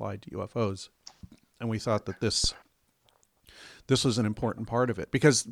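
Speech recording with a phantom power thump at 2.44 to 2.51 s, just after "we thought that". A supply was switched on or off while the input was live, and the resulting voltage step passed through the coupling capacitors into the signal path. It is heard as a deep low-frequency thump reaching about -17 dBFS that decays within about 15 ms.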